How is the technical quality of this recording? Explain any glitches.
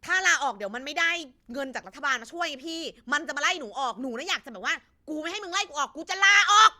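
Nothing in the recording stood out as a technical problem on listening, so there are no glitches to explain.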